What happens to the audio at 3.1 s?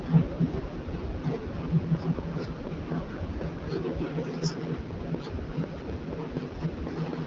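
A steady ticking rides over the sound there, about four clicks per second, peaking around 10 dB above the audio. This train of clicks runs from 1.95 to 7.14 s, likely interference or a faulty connection injecting similar pulses. Underneath, the speech sounds rough and raspy with nothing above 7.6 kHz. That is the AMR wideband (HD Voice) codec at 8.85 kbit/s, whose pulse-driven vocal tract model degrades audibly at this low rate.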